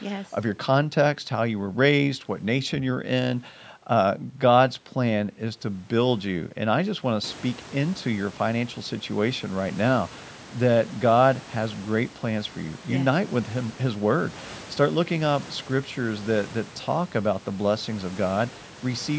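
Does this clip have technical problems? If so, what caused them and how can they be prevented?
No, this speech recording has no technical problems.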